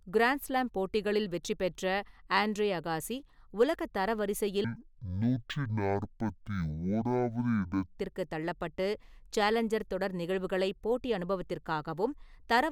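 From 4.64 to 7.98 s the speech drops to half speed and exactly an octave lower, a sign of stereo read as mono: left and right samples are played one after another as one channel. The exact halving and the faint mirrored image high in the spectrum set it apart from an ordinary sample-rate mismatch.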